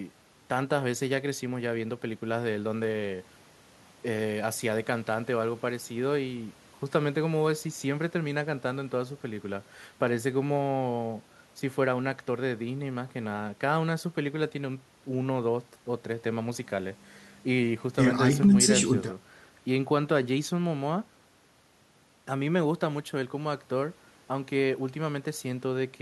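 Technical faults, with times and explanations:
No technical faults can be heard in this speech recording. There is nothing to list by time or to explain.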